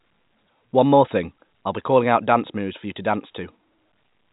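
Nothing stood out on listening to this speech, which comes through the usual narrow telephone band of G.711 telephone coding with nothing above 3.8 kHz.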